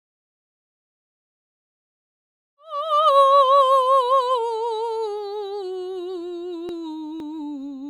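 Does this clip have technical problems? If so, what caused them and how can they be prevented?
No, this music clip has no technical problems, so there is nothing to prevent; the level simply fades in smoothly until about 3.3 s.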